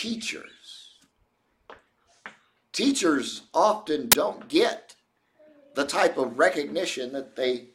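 A sudden burst of very loud white noise cuts in at 4.12 s, a hard-edged crack of static lasting only about 15 ms, with no fade in or out. This is file tags played as audio: the decoder has read an embedded cover picture, stored as compressed image data, as though it were samples. Because compressed bytes are close to random, they come out as loud, flat-spectrum noise.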